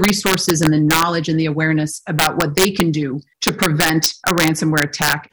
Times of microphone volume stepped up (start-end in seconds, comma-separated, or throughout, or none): none